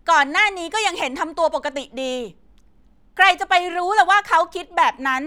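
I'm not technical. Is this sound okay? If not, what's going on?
Yes, this sound is okay, and there's nothing going on with it that you need to worry about.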